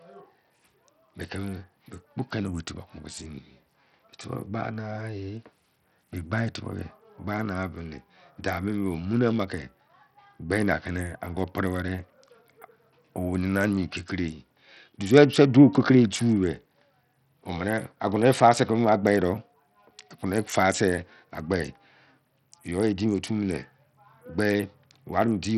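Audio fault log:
Throughout, Bluetooth SBC compression, likely: the speech has a gritty, grainy edge and the top end flickers in and out, with nothing above 16.5 kHz. Starved upper sub-bands lose their bits while the rest get coarsely quantised, which fits a low bitrate around 64 kbps.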